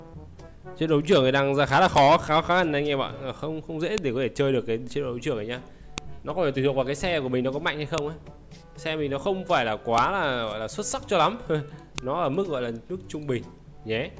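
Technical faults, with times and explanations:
1.98, 3.98, 5.98, 7.98, 9.98 and 11.98 s: file header played as audio. A sharp, loud click lands every 2 s. Each marks the join of a 2-second piece whose WAV header was left in. Those header bytes are played as samples, causing a snap regardless of the sound.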